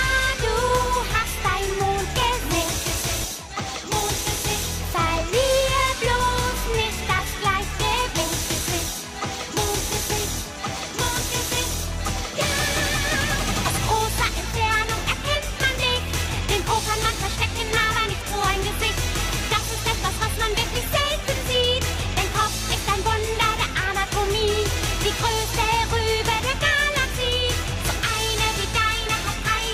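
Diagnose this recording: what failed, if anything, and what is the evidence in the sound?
The failure is an overlap between stream segments at the streaming and playback stage. Short clicks or tiny skips occur at 2.22, 3.22, 6.20, 7.19 and 8.18 s, each removing roughly 10 to 14 ms of sound. They fall on roughly one-second boundaries, matching a 1.0 s segment length. Adjacent segments carry overlapping time stamps, so the player discards the apparent duplicate even though that audio was never repeated. The waveform jumps across the gap.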